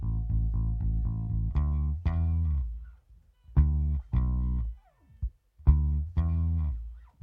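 No technical faults can be heard anywhere in the audio.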